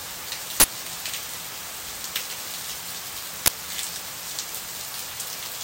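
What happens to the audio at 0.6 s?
At 0.6 s an uninitialised buffer plays out: a 40 ms block, ending at 0.64 s, was sent to output before any audio filled it, so stale memory became samples. It bursts out as loud digital noise, a bright broadband vertical band on the spectrogram.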